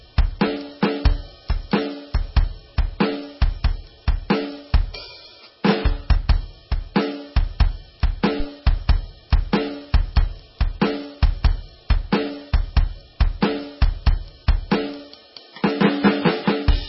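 It's a music clip, and the whole thing has that heavy, watery, swirly quality, with nothing at all above about 5.6 kHz, so the top end is just gone. That's likely MP3 compression at a very low bitrate, somewhere around 18 kbps, starving the encoder of bits. Then at 8.40 to 8.46 s there's a short, deep phantom power thump, where a supply was switched on or off on a live input and the step came through the coupling capacitors, dying away in about 14 ms.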